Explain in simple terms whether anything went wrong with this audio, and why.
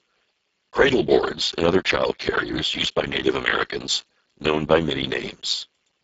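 The speech sounds hoarse, buzzy and somewhat robotic from start to finish, as if squeezed through a cheap walkie-talkie, and the crisp top end is missing. This is heavy Speex codec damage. Speex is an older speech compressor used in internet calls and game chat. At a very low quality setting it keeps only a rough model of the voice, so the natural detail is replaced by noise-like buzz, and nothing is kept above about 7.7 kHz.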